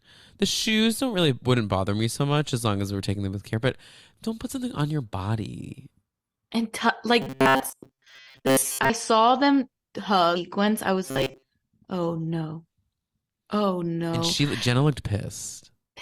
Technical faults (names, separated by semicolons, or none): robotic sound from repeated short buffers; stream segment skipped